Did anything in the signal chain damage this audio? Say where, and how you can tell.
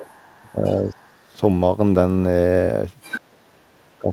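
Yes, in the call processing. You can hear the other side's voice leaking through from 0.0 to 0.72 s and 1.01 to 1.06 s, faint at roughly 30 to 40 dB down, then much louder at 3.02 to 3.2 s. The echo canceller likely didn't fully remove the loudspeaker pickup.

The same stage also causes speech suppressed in double talk. The talker dips by roughly 15 dB at 0.42 to 0.65 s and 0.91 to 1.38 s, then by about 30 dB from 3.2 s to the end. It's likely the canceller couldn't separate the two voices and turned both down.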